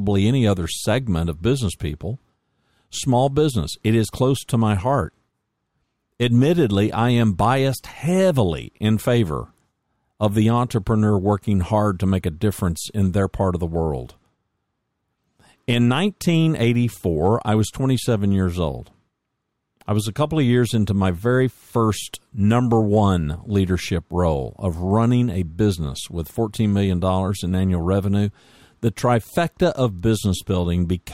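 No technical faults can be heard in the recording.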